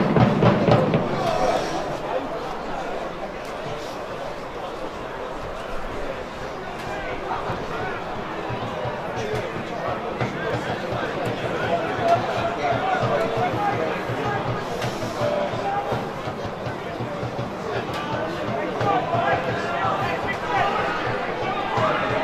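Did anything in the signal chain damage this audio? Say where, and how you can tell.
Yes. Seven brief skips fall at 1.57, 4.55, 7.52, 10.50, 13.48, 16.46 and 19.44 s, spaced about 3 s apart, each removing about 20 ms. This looks like audio missing between chunks, likely at the driver or buffer stage, where a recorder dropped samples while closing one 3-second block and opening the next. On the waveform each spot shows an abrupt splice with no silent gap, and the spectrogram shows a thin vertical discontinuity line.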